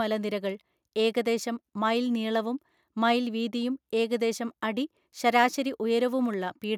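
Speech recording with no technical faults detected anywhere in the clip.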